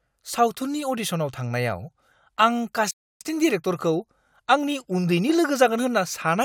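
At 2.91 s the player most likely ran short of data or had its thread blocked, causing a playback stall: output drops to silence in mid-flow for about 0.30 s, and the speech resumes at 3.21 s after the gap.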